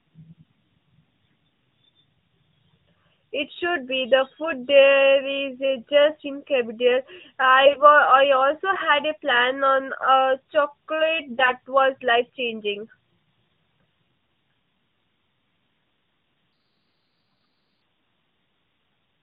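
A speech recording carried over the AMR narrowband mobile codec in its 12.2 kbps mode, with light coding damage and nothing above 4 kHz. AMR bit errors hit at 7.66–7.82 s and 11.30–11.52 s: roughly 7 to 10 percent of the weakly protected bits arrive flipped, misplacing excitation pulses and skewing pitch and gain, so the voice briefly turns hoarse and gargly at about its normal level. A section at the wrong speed runs from 16.53 to 17.82 s, playing 1.28 times fast and about four semitones high, likely from being played against a mismatched clock.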